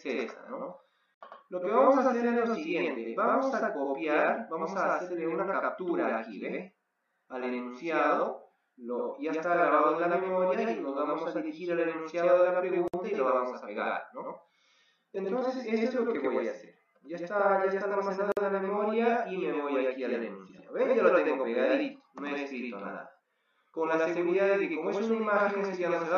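Throughout the clip, one channel runs late by about 92.9 ms, which fits a 4096-sample buffer, and the two channels are summed to mono. This channel delay produces a doubling: every sound is followed by a second, equally loud copy, like a single slap echo.

Separately encoded pieces were joined without trimming their start delay and end padding, so gaps at the joins cut into continuous sound at 1.14–1.21 s (67 ms), 12.88–12.94 s (57 ms) and 18.32–18.37 s (50 ms). Each has smeared edges before the sound resumes where it stopped.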